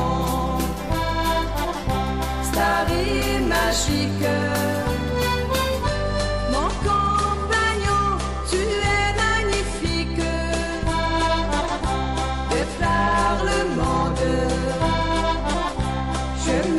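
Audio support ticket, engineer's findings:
Hard clipping, whole clip. Peaks cut flat, crackle and harsh edge on loud moments. Gain stage or converter driven about 6 dB past full scale, so around 2 percent of samples hit the ceiling. The squared tops add high harmonics that were never in the source. Fix upstream level; limiting after the fact won't undo it.

Adaptive stream at a lower bitrate, 5.82 s to end. Sudden quality step with no gap. Treble gone above 11.3 kHz, and codec artefacts rise. Player switched to a lower-bitrate rendition when throughput dropped. The sound fits a fall from roughly 128 to 48 kbit/s MP3. Check network and rendition ladder.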